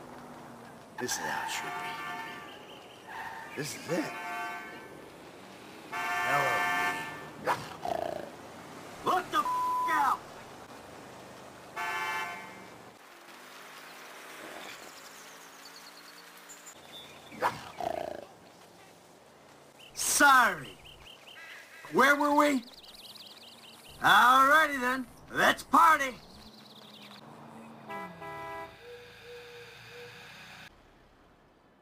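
Sample clock jitter runs through the whole clip. The converter's clock wanders by around ten microseconds, so samples land early or late. Steep, bright passages suffer most. The result is a gritty hiss, roughly 20 dB under the sound, which disappears in silence.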